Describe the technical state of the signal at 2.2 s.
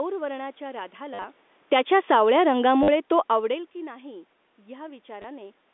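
At 2.2 s you're in the middle of an automatic gain falling stretch, running from about 1.57 s to 3.61 s, just before "की नाही". The gain control decided the input was too loud or its background too strong and started easing its gain down, by about 5 dB over those two seconds. You hear the speech sinking gradually, and the room background sinks right along with it, which gives away that it's the gain moving and not the talker.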